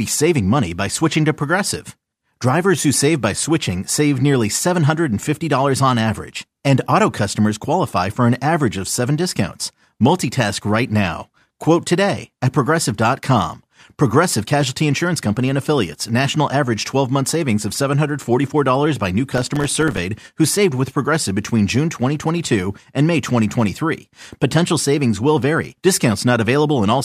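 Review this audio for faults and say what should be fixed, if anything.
Processor overload crackle runs from 19.31 to 19.98 s. The processor misses its buffer deadlines again and again, around thirty times. Each miss drops a short hard-edged gap of silence, consistent with buffers of roughly 1.5 ms. Together the gaps form gritty crackle. To prevent it, use a larger buffer or reduce the processing load during playback.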